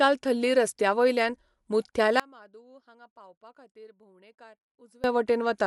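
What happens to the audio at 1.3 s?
At 1.3 s, as throughout the clip, the speech sounds dull, with nothing above 11.5 kHz and rough, fluttering noise, likely Dolby Digital compression at a low bitrate near 64 kbps.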